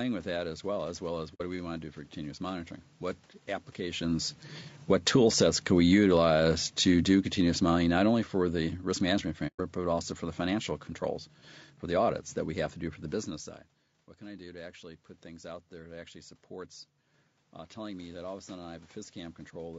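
Throughout, the speech sounds rough and grainy, with noise filling the gaps between harmonics and a thin, synthetic-sounding top end. This is likely low-delay AAC compression such as AAC-ELD, and the damage fits a bitrate near 32 kbps.

From 1.34 to 1.42 s, just after "well as well as" and before "do we want to", the sound fades out and back in around a soft-edged hole of 60 ms. This is AAC frame loss with muting: the decoder zeroed the missing frames (about two), and the overlapping windows smoothed the edges.

From 4.76 to 10.78 s, the level sinks by about 11 dB, leading up to "controls for the audits", with the background dropping along with the speech. This is automatic gain falling: the gain control pulled its gain down gradually.

Inside that stretch, from 9.47 to 9.60 s, a second muted gap of 120 ms opens and closes softly. This is another AAC frame loss with muting, this time spanning roughly four frames that the decoder silenced.

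From 14.19 to 16.42 s, speech and background swell together by about 3 dB. This is automatic gain rising: the talker moved away around 13 s and the input fell by about 17 dB, so the gain control slowly raised its gain in response.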